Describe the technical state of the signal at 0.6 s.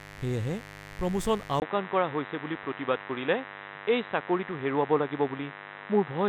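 At 0.6 s the speech sits over mains buzz that runs through the whole clip: switching spikes twice per 50 Hz cycle, roughly 15 dB below the speech, give a raspy buzz. A spectrogram shows evenly spaced horizontal lines at 50 Hz multiples up to several kHz.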